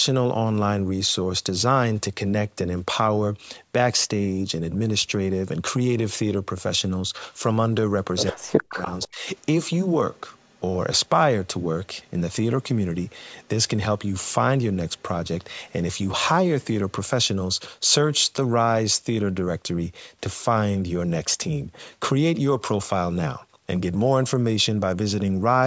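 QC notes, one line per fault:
8.32–8.81 s and 9.08–9.26 s, speech suppressed in double talk. The level falls sharply twice. The first dip lasts about half a second and drops by about 40 dB. The second lasts about 0.2 s and drops by about 25 dB. Both sides were likely talking at once. The echo canceller could not tell the local talker from loudspeaker echo, so it pulled everything down.
8.72–9.08 s, 10.16–10.6 s, 13.43–13.48 s and 14.98–15.02 s, echo leak. A copy of the sound returns 117 ms late. In the first stretch it is strong, only about 10 dB below the speech. The later scraps are faint, around 35 to 40 dB down. The likely cause is a loudspeaker on one side of the call whose echo canceller let part of its microphone pickup through.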